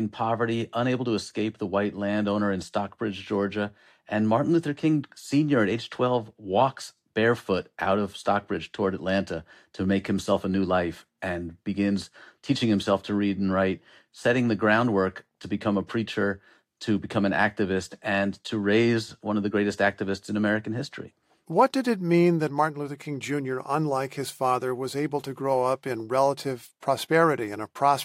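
No technical faults can be heard anywhere in the recording.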